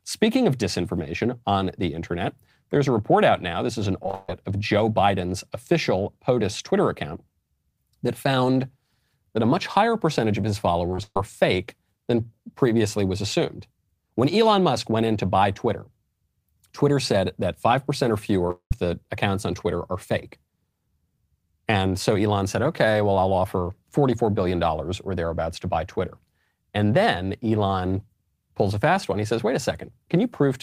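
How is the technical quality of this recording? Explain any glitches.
The recording has clear network glitches: two choppy bursts and a brief smear running into a short gap of silence.

From 4.03 to 4.29 s and again from 10.91 to 11.17 s, the speech turns robotic and broken. This is repeated packet loss: four or five holes, the longest about 0.14 s, patched by stretching the last sound, covering roughly 70% of each span.

At 18.48 to 18.50 s a quick smear is heard. This is short concealed packet loss: about 10 ms went missing and was filled by continuing the preceding sound.

Straight after, from 18.51 to 18.72 s, a fading buzz or hiss gives way to about 0.1 s of silence before the speech resumes. The likely cause is a long network dropout, with about 0.2 s of audio never arriving.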